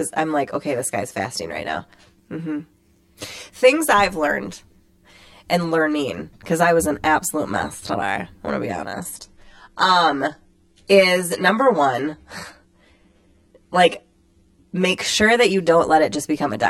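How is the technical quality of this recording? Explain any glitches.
Two problems are audible in this speech recording, one running the whole way through and one in the middle.

Channel delay (comb filtering) is there from start to finish. One channel seems to lag the other by around 10 ms before they're summed to mono, so notches land at evenly spaced frequencies starting near 50 Hz. The result is a hollow, phasey tone throughout.

Adaptive stream at a lower bitrate kicks in at 8.94 s, right after "want to be", and lasts until 14.94 s, just before "sure that you". The quality suddenly drops, with more codec artefacts, but there's no gap. It sounds like the player dropped to a much lower-bitrate stream when the connection slowed. The quality is consistent with a switch to something around 16 kbit/s HE-AAC from a fuller-rate stream.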